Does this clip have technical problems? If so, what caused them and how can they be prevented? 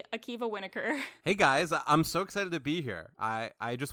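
No, nothing in this speech clip points to a technical problem. Since no fault can be heard, there is nothing here to prevent.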